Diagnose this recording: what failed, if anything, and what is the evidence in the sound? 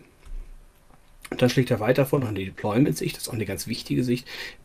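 The network is where this failed. From 2.15 to 2.87 s there is repeated packet loss with a robotic sound. Seven separate holes open in quick succession, none longer than about 20 ms. The receiver papered over each by extending the preceding sound, about 120 ms of fill in total, but roughly 100 ms of real audio never arrived. That leaves a choppy, robotic texture over about a sixth of the stretch. Unlike a stall, content is actually lost here.

Two short stalls from a late packet follow, at 3.75–3.79 s and 4.35–4.39 s. Each time the jitter buffer ran dry and the last sound was held for about 20 ms, matching a 20 ms jump in arrival delay. Playback then resumed exactly where it left off, so nothing is missing. What you hear is a brief sustain with a faint buzz or dip rather than the gapped, clipped pieces of the earlier loss burst.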